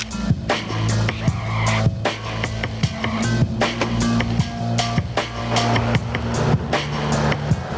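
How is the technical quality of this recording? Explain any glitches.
The recording has one fault throughout, gain pumping, and the audio is band-limited by a call path. Nothing reaches above 8 kHz, which fits a wideband G.722 codec at 64 kbps.

Gain pumping runs across the whole clip. The level is likely pushed too high into a fast limiter that clamps down on each loud sound. The gain swings by around 15 dB, so loud and soft parts end up closer in level and the sound is squashed. The waveform looks flattened.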